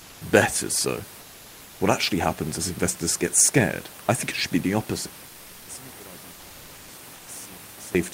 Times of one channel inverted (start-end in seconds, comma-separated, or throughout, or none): 5.07-7.95